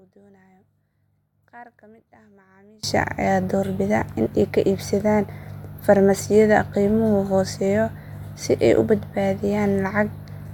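One channel inverted, from the start to 2.83 s: summed to mono, the speech drops by about 31 dB and turns faint, before returning to full level just before "ayaa doorbida in ay". The likely cause is reversed polarity on one stereo channel, so the centred material common to both sides cancels when they are added, leaving only the small difference between them.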